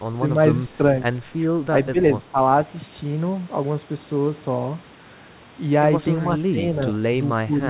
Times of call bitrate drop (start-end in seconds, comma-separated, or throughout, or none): none